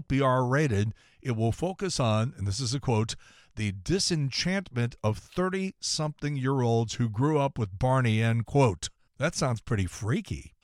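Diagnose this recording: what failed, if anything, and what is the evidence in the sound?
Nothing in the signal points to a failure at any stage: the speech holds steady and continuous throughout, with no audible break, disturbance or change in its character from one moment to the next.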